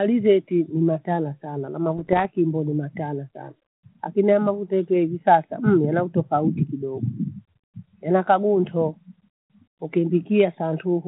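From 1.97 to 2.25 s, bit errors on the ADPCM link, a few per thousand bits, corrupt the decoder's step size and predictor. The G.726 speech breaks into pops and rough bursts, visible as broadband vertical streaks and jagged level jumps in the waveform.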